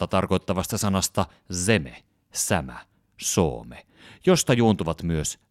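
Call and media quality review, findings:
No findings in the call and media quality review: no faults heard in the speech.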